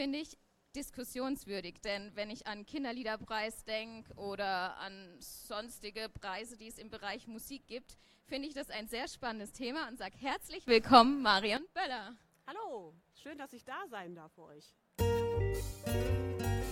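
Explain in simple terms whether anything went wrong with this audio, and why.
Something did go wrong. At 10.68 seconds the whole sound suddenly gets much louder, and it stays that way until 11.57 seconds. The background hiss jumps up together with everything else. This is a sudden gain jump. The likely cause is a volume setting changing in a single instant instead of being eased in gradually. Because nothing smooths the change, the level snaps up abruptly rather than rising, and it sounds like a jolt.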